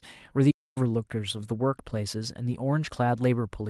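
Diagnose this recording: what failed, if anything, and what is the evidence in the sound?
Playback stall at 0.50 to 0.78 s: the speech halts mid-flow and the output goes silent for about 0.25 s before resuming. The cause is likely at the playback stage, where the player's buffer ran dry or its thread was blocked, leaving nothing to output until it recovered.

Lost packet rebuilt from error correction at 1.37 to 1.39 s: a single 20 ms stretch sounds rougher and noisier, with no gap. This is a network loss covered at the codec. The following packet carried a low-bitrate copy, and the decoder played that instead.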